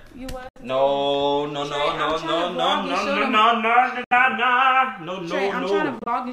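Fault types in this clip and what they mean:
Bluetooth dropout: The sound cuts to silence three times, at about 0.49 s, 4.04 s and 5.99 s, then resumes further along as though it had kept playing underneath. That points to a wireless link likely losing packets before they reach the headphones. The first two holes each remove roughly 70 ms. The last is broken up, short gaps of about 23 ms scattered across roughly 0.12 s. On a waveform these show as flat near-silent stretches. A spectrogram shows blank vertical bands cutting cleanly across every frequency.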